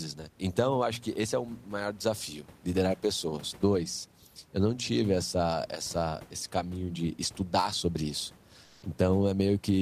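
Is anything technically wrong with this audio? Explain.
Yes. From 8.64 to 8.82 s, about 180 ms, there is comfort noise in place of the background. The room noise, about 29 dB below the speech, gives way to a smooth, featureless hiss, only about 1 dB different in level. The likely cause is Opus discontinuous transmission. The sender stops sending during the pause, and the receiver fills the gap with synthetic noise.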